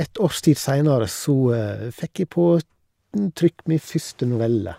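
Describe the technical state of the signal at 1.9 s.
At 1.9 s the speech signal runs intact, with no dropout, click, distortion or other audible fault at that point.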